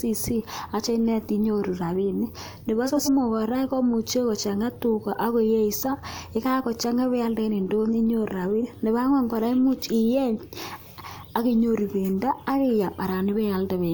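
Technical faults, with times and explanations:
2.86–3.09 s, frames out of order: two neighbouring 93 ms runs were decoded in swapped order, making a garbled flutter.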